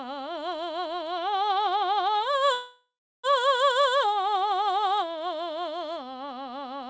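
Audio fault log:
2.54–3.26 s, call audio freeze: packets were likely delayed in transit, emptying the jitter buffer, so the receiver extends the last music into a fading buzz, then about 0.33 s of silence. The music resumes where it stopped, nothing skipped, now 0.70 s late.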